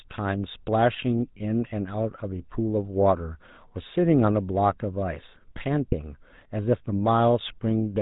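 GSM full-rate codec damage runs through the whole speech clip. The codec models the vocal tract and rebuilds it from a sparse, regularly spaced pulse excitation, cutting everything above 4 kHz, so the speech sounds plainly buzzy and gravelly, consistent with 13 kbps GSM.

Lost GSM frames occur at 1.38 to 1.43 s and 5.90 to 5.94 s. Each gap was patched by replaying the previous good frame's settings, which fits a single lost 20 ms frame, leaving a brief rough, metallic ring in the speech.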